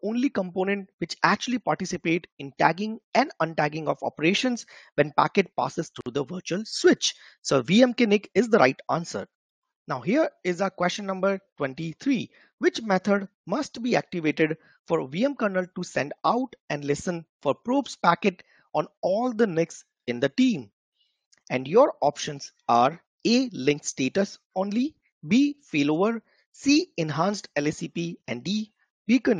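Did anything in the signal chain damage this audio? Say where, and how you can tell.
Yes. Separately encoded pieces were joined untrimmed, so encoder delay and padding put a 54 ms gap at a join at 6.01–6.06 s, a silence with smeared edges before the sound resumes.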